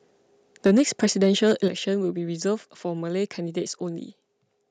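From 0.65 to 1.53 s the speech carries microphone overload: peaks push about 4 dB past the converter's ceiling and a couple of percent of samples are flattened, giving a harsh crackle on the loudest syllables, most likely from input gain set too high. Unlike codec distortion, the grit tracks only the loud peaks. The microphone volume is stepped down at 0.67 s by about 2 dB and again at 1.68 s by about 7 dB. Speech and background both drop at once, likely the call software cutting input gain after clipping, not a gradual fade.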